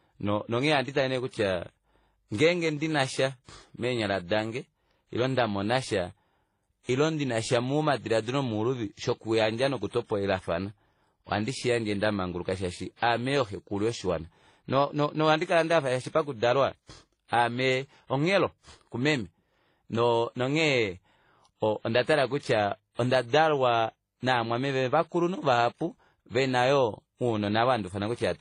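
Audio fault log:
Throughout: transcoding between lossy codecs. Nothing above about 10.4 kHz, with two distinct sets of artefacts layered on the speech. This is likely a low-rate WMA encode, around 32 kbit/s, re-encoded as HE-AAC near 24 kbit/s, the second codec wasting bits on the first one's damage.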